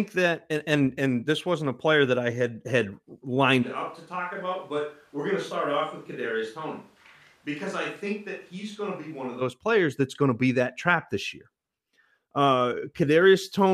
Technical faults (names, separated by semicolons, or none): switch to a distant microphone